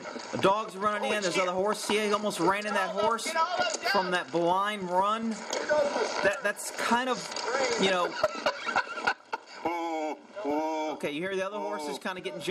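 A sudden gain jump arrives at 9.13 s: the level drops by about 6 dB in a single step and stays there to the end. The sound and its background noise fall together, with no fade between the louder and quieter sections, so the change registers as an abrupt step rather than a natural decrease. The likely cause is a digital gain setting, or an equivalent one-bit shift, applied instantly from one sample to the next without any smoothing ramp.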